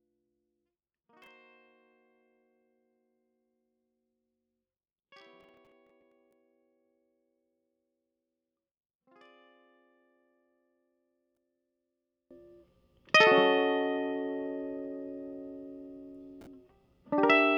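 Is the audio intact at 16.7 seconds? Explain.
Yes, the music plays through 16.7 seconds without any dropout, click, glitch or other fault.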